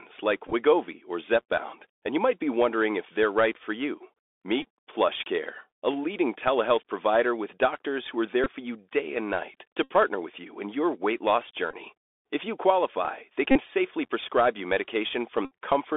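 Throughout this speech clip the sound is boxed into a narrow telephone band, roughly 300 Hz to 3.5 kHz, with scratchy s sounds, a grainy hiss under the voice, and rough distortion on loud, bright syllables. That is the Bluetooth CVSD headset codec, and it fits a 64 kbps CVSD link. The codec sends one bit per sample saying only up or down, so its adaptive step cannot keep pace with fast high-frequency movement. The band limit removes everything above it.

Seven times the audio breaks into a short buzzy stutter. The first is at 0.48–0.54 s. The second, at 4.62–4.68 s, follows "they're right for you". The third is at 8.44–8.46 s. The fourth, at 9.83–9.90 s, falls between "day and night to" and "with you in your". The fifth, at 11.71–11.76 s, follows "in your weight loss". The last two are at 13.51–13.58 s and 15.45–15.55 s. This is a Bluetooth headset packet repeated fault. Packets were lost, and the last good one was decoded again in their place, with the 3.75 ms repeat producing a buzz near 267 Hz. 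The lost audio runs from about 19 ms to 64 ms per event. At 0.48 s about 30 ms is lost, scattered in short runs of around 10 ms.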